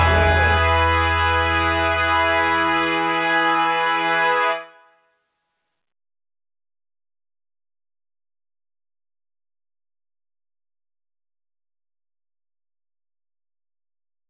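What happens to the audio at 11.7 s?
Nothing goes wrong at 11.7 s; the audio is intact there, carried through the call path's telephone-band codec with nothing above about 4 kHz, as it is throughout.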